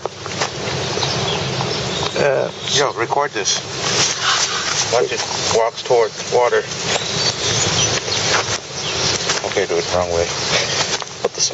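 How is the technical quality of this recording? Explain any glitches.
The recording has one fault, audible throughout. The sound is band-limited to about 8 kHz, which fits a wideband call codec.

Gain pumping runs the whole length. The level swings by around 20 dB. Loud and soft parts sit closer in level, and the sound is squashed. The likely cause is excessive input gain with a fast limiter clamping it.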